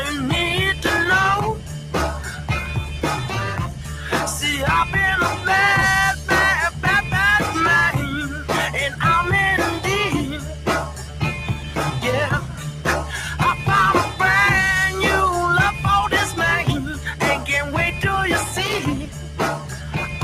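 A loose connector crackle appears first, from 0.87 to 1.05 s: a short, irregular burst of scratching where a worn or dirty contact is making and breaking. Each break chops the signal, and any DC on the line turns the reconnections into pops. It returns once near the end, from 18.66 to 18.79 s, with the same rough, broken texture.

Throughout the clip, a noise suppressor applied to music or sounds is working on material it was not designed for. It treats steady tones, ambience and reverberant tails as noise, so the level pumps and flutters by around 10 dB as the suppressor opens and closes. Onsets come through largely intact, but anything that holds or decays is pulled down, leaving the sound thinner and less continuous than it should be.

Within that, there are seven moments where the sound is cut by the noise suppressor more deeply than elsewhere: 1.55 to 1.94 s, 3.68 to 4.07 s, 8.32 to 8.49 s, 10.38 to 11.77 s, 12.40 to 12.85 s, 16.96 to 17.48 s, and 19.03 s to the end. 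In each, sustained or fading sound sinks by up to about 6 dB or has its decay clipped short. The longest stretches, at 10.38 s and at the close, lose roughly a second of affected material each, while the shorter cuts last only a fraction of a second.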